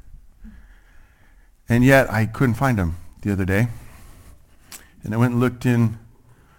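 Speech with sample clock jitter throughout: the converter's timing wobbles by roughly ten microseconds, misplacing steep waveform slopes. This adds hiss-like roughness about 25 dB below the voice, loudest on sibilants and gone in pauses. Spectrograms show high-frequency noise tracking speech energy, with clean gaps.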